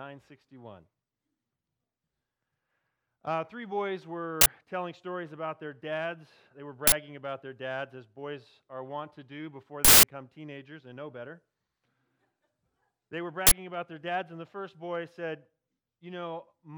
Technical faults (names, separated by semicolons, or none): uninitialised buffer